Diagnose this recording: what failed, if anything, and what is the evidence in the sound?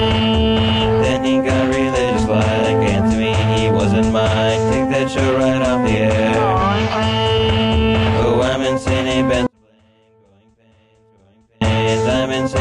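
An audio dropout to a faint residue hits from 9.47 to 11.61 s, about 2.1 s. The waveform and spectrogram suddenly thin to a faint trace about 40 dB down, likely from an intermittent analogue connection.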